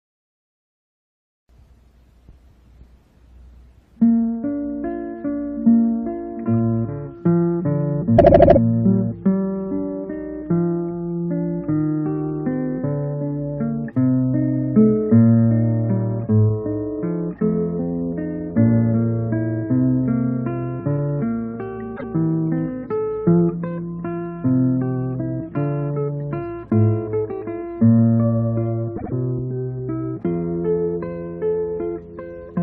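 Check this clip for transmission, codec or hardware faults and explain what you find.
Repeated frames occur three times: a 78 ms block plays five extra times at 8.17 to 8.58 s, a 157 ms block once more at 21.96 to 22.11 s, and a 78 ms block twice more at 28.96 to 29.12 s. Duplicated compressed frames make the decoder replay the same slice, heard as a stutter. On a spectrogram or waveform, identical blocks appear side by side.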